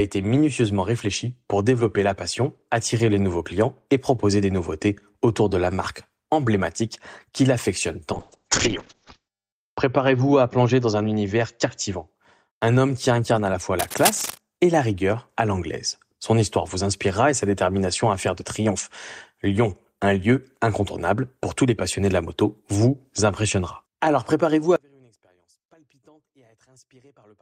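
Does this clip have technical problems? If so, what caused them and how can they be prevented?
Yes. There are three problems.

Call bitrate drop, from 8.13 to 12.13 s: the speech turns rough and watery and loses its top end, with the audible bandwidth shrinking from 20 kHz to about 8 kHz. That fits the encoder being pushed from around 40 kbps down to about 6 kbps after the call's bandwidth estimate fell. At that rate the codec quantises far more coarsely and discards the highs. The worst stretch lasts about 1.4 s before quality climbs back. To prevent it, give the call a stable, uncongested connection, preferably wired, and set a sensible minimum bitrate.

Cable scratch noise, from 13.79 to 14.40 s: a dense, irregular burst of scratching and rustling sits over the speech at only a little below its level. This is likely a worn cable, connector or control being moved, with its contact resistance fluctuating rapidly and injecting crackle into the signal. 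The burst stops as soon as the contact settles. To prevent it, replace or clean worn cables and connectors and keep them still while recording.

One channel inverted, from 24.76 s to the end at 27.41 s: the voice suddenly drops by about 34 dB and almost disappears, leaving only a faint residue. This is likely one stereo channel having reversed polarity, so the centred speech, identical in both channels, cancels when they are summed to mono. Only the small difference between the channels survives. To prevent it, check channel polarity in the signal chain and confirm the mix in mono before delivery.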